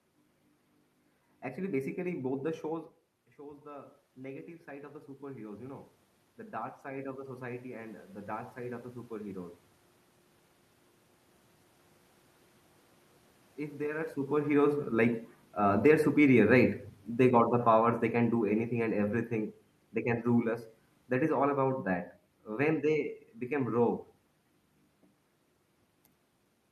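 Around 2.5 s the talker moves away and the input drops by about 15 dB. From 3.36 s to 9.6 s the automatic gain rises, climbing about 10 dB to compensate. Voice and room noise swell together over those six seconds. On a waveform the envelope widens steadily across that span. On a spectrogram the noise floor between phrases brightens in step with the speech, which shows that a gain stage is acting rather than the talker.

After the talker moves again near 14.0 s, the automatic gain control finds the input too loud or its background noise too strong. From 14.37 s to 19.26 s the automatic gain falls by about 7 dB. The sound starts hot, then sinks gradually, and the room noise sinks with it. A waveform shows large peaks at first that taper over nearly five seconds. A spectrogram shows speech and background darkening together, the same coupled movement as before but in the opposite direction.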